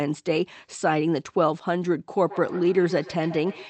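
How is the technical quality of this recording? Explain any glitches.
The recording has one clear fault in its final stretch: feedback echo between two devices, running from 2.21 s to the end. The sound comes back at a steady interval of roughly 150 ms, each return thinner and more metallic, peaking about 17 dB below the direct sound. A second device in the same room is replaying this signal, and the first device's microphone picks it up again. Each device's echo canceller removes only its own playback, so the loop keeps cycling. Unlike a single acoustic echo or room reverberation, the repeats come in a regular train, and each pass sounds more filtered than the last. Throughout the clip, the call codec's coding keeps the top end limited to about 8 kHz.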